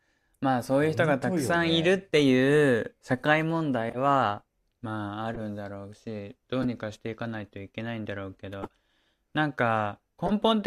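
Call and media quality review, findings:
Corrupt frame decoded: short chirpy blips in the speech at 1.68, 3.89–3.97, 5.34–5.39, 6.62–6.65, 8.63–8.67 and 10.26–10.31 s. Peaks around -20 dBFS, with the last one hotter at about -10. Decoder is playing bit-damaged frames instead of concealing them, so misread gains spray energy into the wrong bands.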